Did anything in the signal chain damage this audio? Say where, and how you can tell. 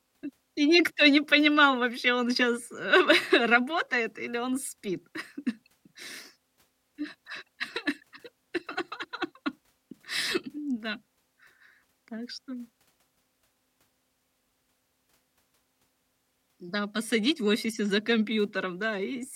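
No, nothing in the signal chain damaged this audio.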